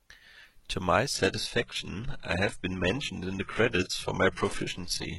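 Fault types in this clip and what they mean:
adaptive stream at a lower bitrate: From 1.14 s to the end the speech abruptly loses its top end, with nothing above 11.5 kHz, and codec artefacts rise, with no gap. The stream switched down mid-play, which fits a move from 96 kbit/s AAC to 12 kbit/s HE-AAC.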